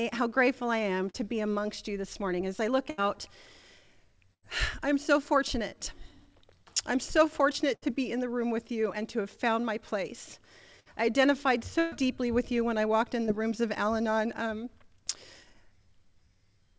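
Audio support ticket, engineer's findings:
Short concealed packet loss, 1.10–1.16 s and 13.26–13.30 s. Brief smear or wobble in the sound, about 40 ms and 20 ms of audio missing respectively. Component: receiver-side jitter buffer / decoder concealment. Mechanism: packets arrived too late or not at all. The decoder extended the preceding sound to cover the hole, then cross-faded back into real audio. Short transients inside the gap can drop out.

Burst of packet loss at 2.90–3.00 s, 4.34–4.44 s, 7.74–7.84 s, 10.80–10.88 s and 11.80–11.94 s. Held buzz or fading hiss, then resumption with material skipped: about 80 ms missing in each of the first three, 60 ms at 10.80 s, 120 ms at 11.80 s. Component: network path feeding the jitter buffer. Mechanism: consecutive packets lost, so concealment stretched the last sound and attenuated it over the gap. The 11.80 s event is the longest.

Call path band-limited with no content above 8 kHz, which fits a wideband codec such as G.722.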